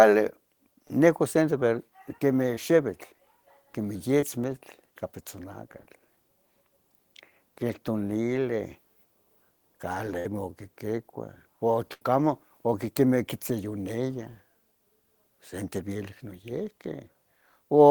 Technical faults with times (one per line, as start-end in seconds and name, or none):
0.87-0.90 short concealed packet loss
2.54-2.57 short concealed packet loss
4.20-4.23 short concealed packet loss
10.19-10.25 burst of packet loss
11.93-12.02 burst of packet loss
13.81 short concealed packet loss